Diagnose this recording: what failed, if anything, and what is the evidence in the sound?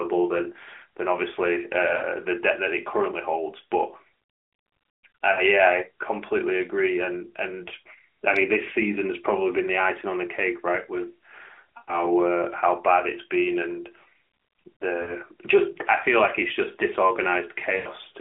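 What failed is the network side of a mobile call: lost AMR speech frames. You hear five short dropouts, at 1.98–2.03, 5.32–5.41, 11.78–12.08, 15.02–15.14 and 17.76–17.88 s. The short ones lose just two or three frames, 40 to 60 ms. The longest, at 11.78 and 17.76 s, lose about 100 ms, which fits five 20 ms frames. There the sound smears out and fades before the speech recovers a bit rough. Radio errors corrupted those frames, and the narrowband decoder kept replaying its last good settings at falling gain.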